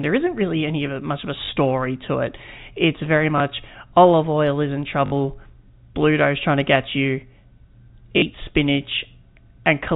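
Packets went missing on this G.711-coded speech and the receiver replayed the last one, causing packet loss with the last packet repeated. The result is small blips at 1.46–1.48 s and 3.38–3.40 s and buzzy robotic stutters at 5.06–5.12 s and 8.18–8.22 s, with lengths that fit 20 ms packets.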